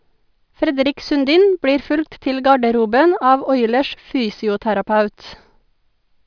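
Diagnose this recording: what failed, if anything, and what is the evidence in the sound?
Nothing in the signal chain failed: the speech is continuous, with no dropouts, level jumps, distortion or timing disturbances anywhere in the recording.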